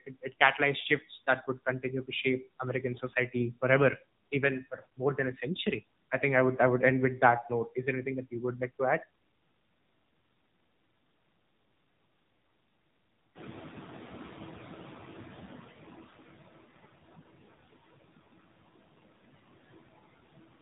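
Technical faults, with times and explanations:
Throughout, noise suppressor artifacts: the suppressor pulls bands it judges to be steady noise down by about 19 dB frame by frame, so the background drops away in pauses and returns under speech. The room noise rises by about 11 dB from a little after 13 s.
Throughout, AMR narrowband mobile codec: nothing passes above 3.8 kHz, leaving speech muffled and band-limited. The plainly audible buzzy, synthetic texture and swirling background fit a low AMR-NB mode around 7.4 kbps, where too few pulses per subframe are left to model the voice's excitation.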